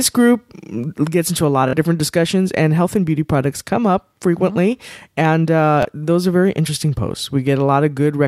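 Speech with two Bluetooth stutters. From 1.68 to 1.73 s, right after "gets into a lot", a short slice repeats for about 46 ms, heard as a brief buzz, consistent with two consecutive lost packets. At 5.83 s, just before "those are very interesting", a single repeat of about 23 ms fills the gap of one missing packet. In both cases the receiver replayed its last buffer, then resumed further along, skipping the lost audio.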